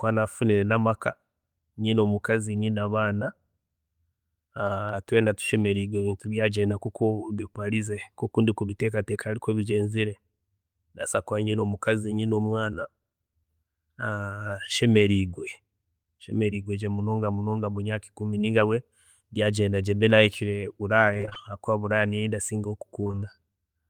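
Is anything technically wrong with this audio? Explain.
Yes, two kinds of fault are audible in this speech recording.

Dropped samples are heard as single sharp clicks at 4.89 s and 20.10 s. Each is likely a tiny loss of a fraction of a millisecond, only a few samples, so the waveform jumps straight to a later value. Nothing audible goes missing, which separates it from packet loss: the sound carries on unbroken apart from one instantaneous tick, a thin vertical line on a spectrogram.

Repeated packet loss gives a robotic sound from 21.13 to 21.37 s and from 23.03 to 23.23 s. In each stretch, short holes of up to about 20 ms arrive one after another, roughly six in the first and five in the second. Each hole is filled by stretching the preceding sound, so about half of each span is patched rather than real. Unlike the isolated clicks, this runs for a quarter of a second or so and sounds choppy, with pieces of speech missing.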